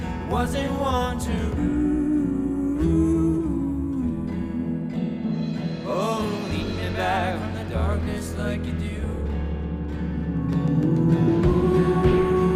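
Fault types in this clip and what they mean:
No fault types are present in this clip.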